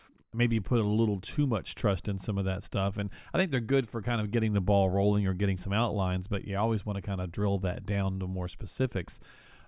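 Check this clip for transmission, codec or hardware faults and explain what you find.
Nothing in this speech recording points to a fault. The sound holds steady throughout, with no disturbance anywhere to report.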